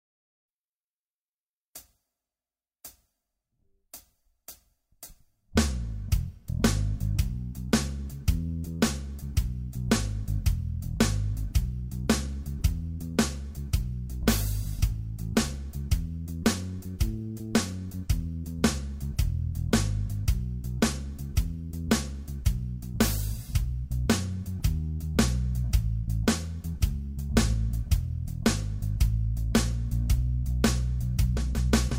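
No technical faults can be heard anywhere in the clip.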